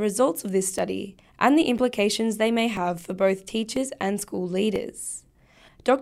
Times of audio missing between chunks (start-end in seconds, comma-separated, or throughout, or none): 0.79, 1.78, 2.77, 3.76, 4.76